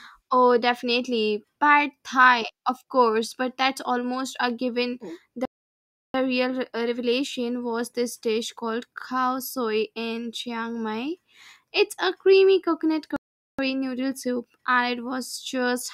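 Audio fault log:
5.45–6.14 s and 13.16–13.59 s, playback stall: the player likely ran short of data or had its output thread blocked, so the speech cuts to silence mid-flow for about 0.69 s and then about 0.42 s before sound returns.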